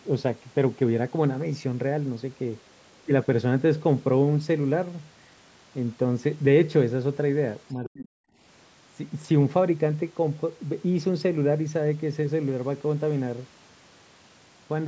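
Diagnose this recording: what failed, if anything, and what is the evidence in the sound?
Between 7.75 and 8.09 s the speech is suppressed in double talk, a call-processing failure. The level falls away in pieces, at its deepest around 40 dB down, and the gaps add up to roughly a third of a second. The likely cause is an echo canceller that heard both sides at once, could not tell its own talker from the loudspeaker echo, and attenuated everything. On a waveform the envelope shows ragged holes. A spectrogram shows the speech bands going dark in patches.

Inside that same dip, from 7.85 to 7.89 s, the other side's voice leaks through, again a call-processing failure. It is a brief scrap sitting roughly 15 dB below the speech. The likely cause is the echo canceller leaving part of the loudspeaker signal in the microphone path. On a spectrogram it shows as a faint, short smear of different harmonic structure among the suppressed patches. 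Like the rest of the call audio, it stops at 8 kHz.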